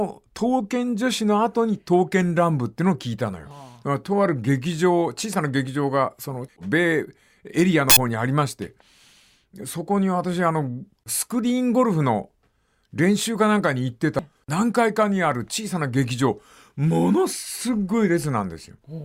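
Speech with damaged data in a compressed stream: corrupted bytes make the decoder lose frame sync, giving brief chirps or blips at 3.51 s, 7.90–7.97 s and 14.19 s.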